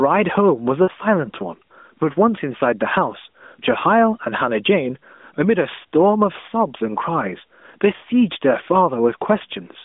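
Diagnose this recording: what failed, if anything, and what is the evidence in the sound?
Gain pumping is audible right through, with roughly 10 dB of swing. That points to call processing, likely an input gain set far too hot with a fast limiter or compressor clamping it down on each peak, squashing the dynamics.

Lost AMR speech frames show up twice, at 0.84 to 0.90 s and 7.96 to 8.01 s. Each is a short smeared dip where the sound stretches, fades, then comes back a bit rough. That's a network problem. Each 40 ms hole fits two 20 ms frames that failed their checksum, and the decoder bridged them by repeating the last good pitch and vocal-tract settings at falling gain. The narrowband line itself, 200 Hz to 3.6 kHz, carries only light codec texture.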